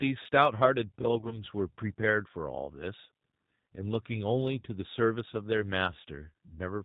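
Throughout, the speech carries plainly audible G.729 codec damage. Nothing above 4 kHz survives, so the sound is narrow and dull. The decoder rebuilds each 10 ms frame from a vocal tract filter, a pitch predictor and a few pulses. That leaves the speech rough and slightly synthetic. The character fits G.729A at about 8 kbit/s.

From 1.19 to 1.39 s comes VoIP packet loss concealed by the speech codec. The gaps are scattered, about 60 ms of missing audio spread over roughly 120 ms, with no single run longer than 20 ms. Each time, the decoder repeats its last pitch and filter at falling gain. The sound turns briefly into a buzzy tone or coloured noise, then stays weak as later frames rebuild. A shorter event follows at 4.60 to 4.63 s, about 30 ms long, with the same fading fill.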